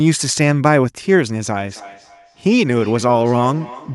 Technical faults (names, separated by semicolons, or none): feedback echo between two devices